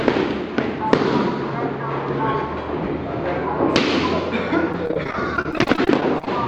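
From 4.72 s to 6.27 s, the sound breaks up with repeated packet loss (robotic sound). Data kept going missing or arriving late, over and over. Each hole was patched by stretching out the last bit of sound. About two dozen short holes occur across that stretch, the longest around 31 ms. Roughly a quarter of the span is patched sound. The result is choppy, with small pieces gone.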